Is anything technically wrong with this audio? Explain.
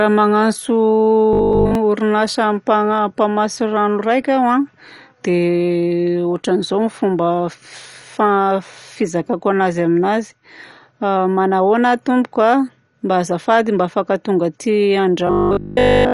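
Yes. The speech is dull and gurgly throughout. This is likely MP2 compression at a low bitrate, near 48 kbps, switching off upper sub-bands.

From 1.33 to 1.75 s, and again from 15.27 s to the end, it becomes a metallic 50 Hz buzz. This is robotic sound, likely from repeated 20 ms buffers replacing most, then all, of the audio.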